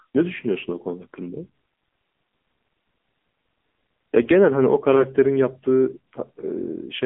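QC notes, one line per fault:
Throughout, AMR narrowband mobile codec: the speech is confined to a telephone band of roughly 200 Hz to 3.4 kHz, with nothing above 3.6 kHz, so sibilants and air are gone and the voice sounds boxed in. The codec damage is plainly audible: each 20 ms frame rebuilds the voice from a vocal-tract filter fed by a few sparse pulses, and the result is buzzy and synthetic, which fits a middle mode around 7.95 kbps.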